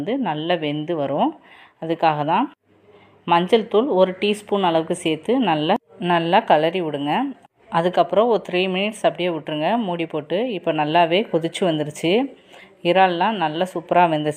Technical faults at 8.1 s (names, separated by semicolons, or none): none